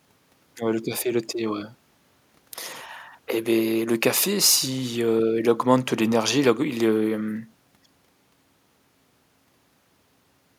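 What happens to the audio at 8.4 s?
Nothing goes wrong at 8.4 s: the speech carries on cleanly through that moment, with no dropout, click, distortion or other audible fault.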